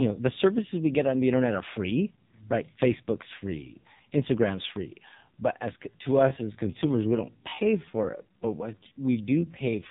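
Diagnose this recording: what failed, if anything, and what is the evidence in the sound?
Codec stage: the whole clip passes through an AMR narrowband mobile codec (AMR-NB). Nothing above 4 kHz survives, and the speech is buzzy and synthetic, with heavy codec damage. That fits a low mode near 5.9 kbps, where too few pulses drive the vocal-tract model.

Processing stage: from 5.87 s to the end at 9.91 s, the pace abruptly drops to about 0.71 times normal speed while the pitch stays unchanged. This is likely a time-stretched section, lengthened by repeating short pieces of audio.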